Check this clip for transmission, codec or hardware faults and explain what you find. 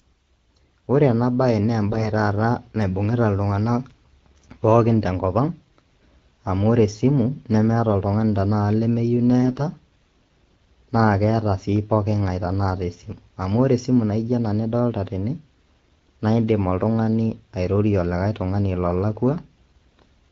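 Two short bursts of AMR bit errors are audible. The first runs from 1.89 to 2.08 s, the second from 9.42 to 9.60 s. On a poor link, some less protected bits in each speech frame arrive flipped. The frame still passes its check and gets decoded. Pulse positions and fine pitch, gain and spectral values come out wrong. Pitch and level roughly hold, but the speech turns hoarse, scratchy and gargly. The second burst has roughly 7 percent of bits wrong, the first about 5 percent. The bursts hit eight and nine 20 ms frames respectively. The underlying AMR wideband coding sounds clear, which fits its 12.65 kbit/s mode.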